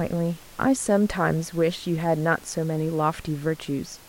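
No technical faults can be heard anywhere in the speech. The room noise from the microphone's surroundings sits in the background, about 24 dB below the speech.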